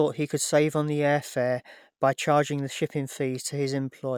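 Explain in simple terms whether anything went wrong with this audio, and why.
Nothing went wrong here: the speech comes through with no audible faults anywhere in the recording.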